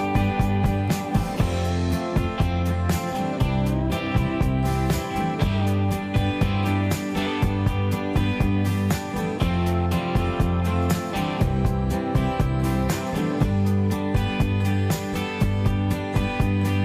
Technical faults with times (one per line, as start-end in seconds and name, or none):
none